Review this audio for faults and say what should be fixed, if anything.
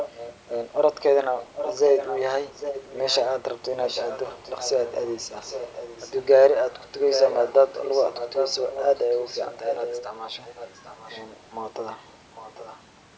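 Echo leak occurs at 0.00–0.38, 1.38–3.17, 3.86–6.25, 6.82–10.03, 10.44–11.22 and 12.12–12.82 s. A quieter copy of the speech returns about 0.8 s late. It is strongest from 6.82 to 10.03 s and faintest near the end. The likely cause is a far-end echo canceller letting loudspeaker pickup back into the call. Room reverberation decays smoothly, but this is a distinct repeat at a fixed lag. To prevent it, the far end should use a headset or lower its speaker volume.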